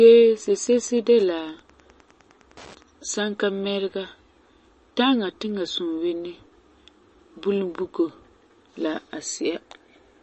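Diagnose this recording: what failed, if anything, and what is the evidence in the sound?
At the codec stage, the speech has nothing above 8.3 kHz throughout and sounds watery, with swirling on sibilants. A spectrogram shows a flat ceiling and weak bins flickering between frames. This is likely MP3 compression, with damage that points to a bitrate near 34 kbps.

Wi-Fi interference enters at the analogue wiring from 0.37 to 2.9 s as faint ticking about ten times a second, roughly 30 dB below the speech. The circuit rectifies a nearby radio's beacon every 102.4 ms, showing as evenly spaced thin vertical lines on a spectrogram.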